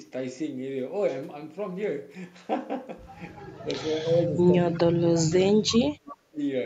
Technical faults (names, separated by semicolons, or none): speech suppressed in double talk; echo leak